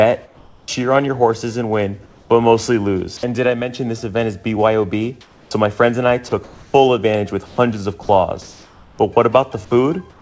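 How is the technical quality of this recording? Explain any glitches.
The recording has audible gaps where the background is replaced, plus one choppy stretch. The audio passed through a call codec with nothing above 8 kHz, which fits a wideband codec such as G.722.

Comfort noise in place of the background: at 0.26–0.68 s, 2.06–2.30 s, 8.42–8.99 s and from 10.10 s to the end, the quiet background turns into a flat, featureless hiss. It is about 5, 3, 0 and 7 dB lower in each gap. The likely cause is discontinuous transmission: the sender stopped sending during pauses, and the receiver synthesised stand-in noise.

Sound chopped by the voice detector: from 5.21 to 7.58 s the sound breaks up, with about 750 ms in total swapped for synthetic noise. This is likely a voice detector repeatedly switching transmission off and on, clipping quieter sound.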